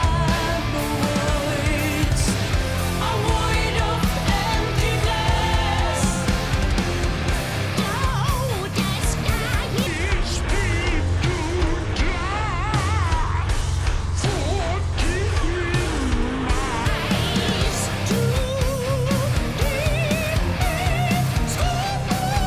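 From 9.87 to 16.85 s, a wrong sample rate: 48 kHz audio played at 32 kHz runs at 0.667 speed, about 7 semitones low, with spectrogram harmonics compressed downward.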